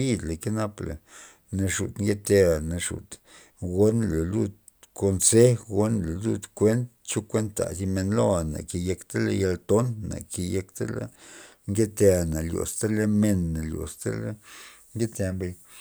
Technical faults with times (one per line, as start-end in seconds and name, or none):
none